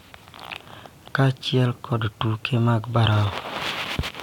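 No technical faults occur anywhere in the speech, so there is nothing to describe in time order.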